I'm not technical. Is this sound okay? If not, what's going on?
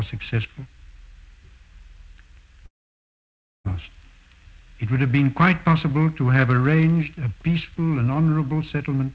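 No. From 2.66 to 3.67 s the sound fades into a brief buzz, then silence for about a second, and resumes with that part missing. This is likely a long network dropout, not a brief skip.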